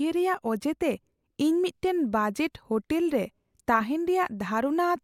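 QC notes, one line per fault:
No faults found in this speech clip.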